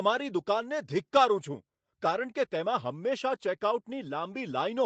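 Nothing stood out on listening to this speech, which carries the upper limit near 8 kHz that comes from its trip through a call's microphone processing and Opus codec.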